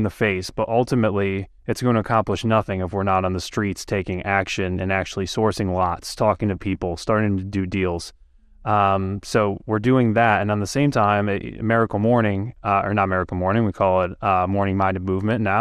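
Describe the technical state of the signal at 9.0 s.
At 9.0 s the speech sounds dull and gurgling, with a granular edge. It stays that way for the whole clip. This is likely MP2 compression at a low rate, around 80 kbps. Upper sub-bands drop out and flicker, and the remaining bands are coarsely quantised.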